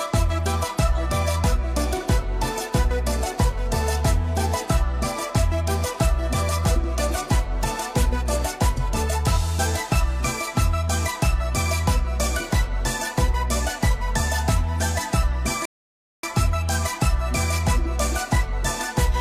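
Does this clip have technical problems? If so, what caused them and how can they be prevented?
Yes. At 15.65 s the sound drops abruptly to silence and picks up again at 16.23 s exactly where it left off, with nothing missing. This is a rebuffering stall: playback used up its downloaded audio and waited for more, adding 0.58 s. A larger playback buffer or a lower-bitrate stream would prevent it.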